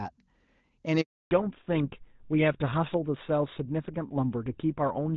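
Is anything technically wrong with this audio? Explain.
Yes, there are two faults: a handover gap followed by a fallback to narrowband.

A handover gap runs from 1.01 to 1.31 s. While the phone switched networks, no speech frames arrived for 300 ms, so the voice cuts off abruptly, the line goes silent, and whatever was said in that stretch is simply missing.

A fallback to narrowband follows from 1.31 s to the end. After the handover the call no longer carried HD Voice, whose clean wideband sound before the gap fits AMR-WB at its top rate. It dropped to an older codec, consistent with GSM full rate, and nothing above 4 kHz survives, leaving the speech muffled and coarser.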